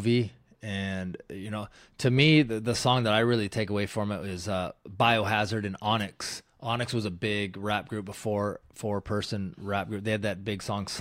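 At 5.99 to 6.03 s the speech is hit by a wireless microphone noise hit. The analogue FM radio link fades as reflected signals cancel. Receiver noise surges through for about 36 ms. It sounds like a brief swish of static.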